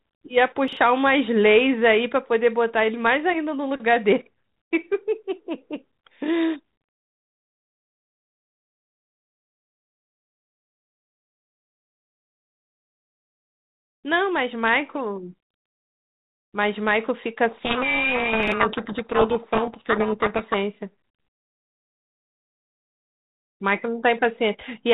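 The clip is speech carried over G.726 ADPCM, band-limited below 4 kHz as telephone audio is, with a bandwidth and light coding noise that fit the 32 kbit/s rate. Chunks out of order occur twice, from 0.68 to 0.77 s and from 18.43 to 18.52 s. Each time a 42.67 ms chunk plays one chunk late. No audio is lost, but the sequence jumbles briefly. Each time there are three hard joins. A codec payload misread runs from 17.48 to 20.57 s. The sending and receiving ends disagree on the bit order of the G.726 code words. The decoder therefore reconstructs wrong sample differences. Harsh distortion buries the speech until the two ends match again. The second reordering falls inside this stretch.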